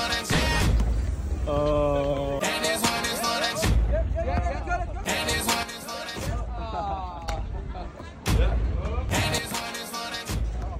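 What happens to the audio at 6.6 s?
At 6.6 s the sound sits inside a sudden gain jump lasting from 5.63 to 7.28 s. The digital gain was most likely switched in a single step rather than ramped, so the level falls by about 9 dB at 5.63 s and snaps back up at 7.28 s. The sound and its background noise drop and return together.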